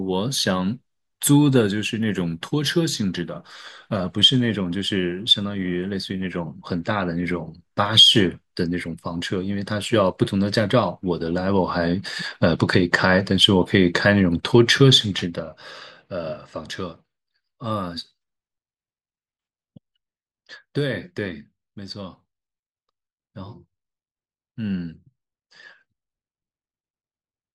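From 15.14 to 16.48 s, zipper noise: a level drop of roughly 10 dB is applied in unsmoothed steps, around fifteen per second, producing an audible ticking over the speech.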